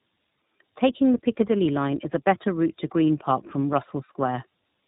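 Throughout, tandem speech coding stacks two narrowband speech codecs, fitting AMR-NB then iLBC, so the speech sounds rough, muffled and warbly. On a spectrogram, nothing appears above 3.8 kHz.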